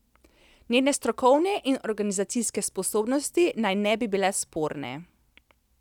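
No audible technical faults are present anywhere in this recording.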